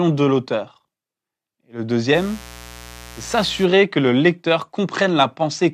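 A steady, raspy buzz sits under the speech from 2.12 s to 3.67 s, stopping just before "que le lecteur", at roughly 20 dB below the speech level. This is mains buzz on a 60 Hz supply: sharp switching spikes, twice per mains cycle, from something like a dimmer, a rectifier or an unshielded cable, have leaked into the signal. They bring a dense ladder of 60 Hz harmonics reaching into the kilohertz range, which gives the buzz its rasp.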